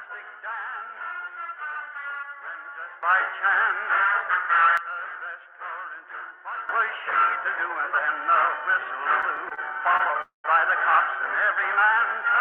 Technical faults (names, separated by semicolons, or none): sudden gain jump; repeated stalls (stutter); short stall from a late packet; call audio freeze